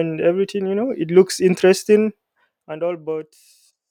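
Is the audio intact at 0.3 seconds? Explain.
Yes, the audio is intact at 0.3 s, with no fault at that moment.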